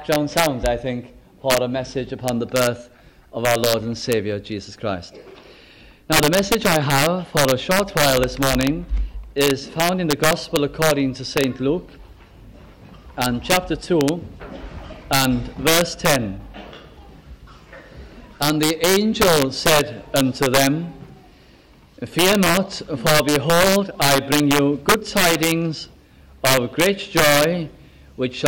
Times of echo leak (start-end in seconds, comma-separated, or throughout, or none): none